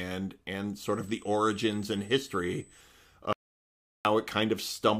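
From 0.81 s to 2.81 s there's a USB whine, a steady tone sitting right at 8 kHz and roughly 25 dB under the speech. That pitch matches the bus's 125-microsecond microframes, with the current draw bleeding into the audio through power or ground. Then at 3.33 s the speech cuts out dead for about 0.72 s, an audio dropout to silence lasting until 4.05 s. There's no room tone at all, just silence, so the input was likely lost for a moment while recording kept running.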